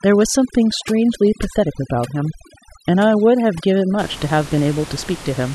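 Overdone noise removal runs from 0.0 to about 4.0 s. A noise reducer set too aggressively pulls individual frequency bands down or out whenever they sit near its noise estimate. Quiet parts of the speech vanish with them, over a background that drops and breaks up into twinkling specks. The room noise sits about 17 dB below the speech.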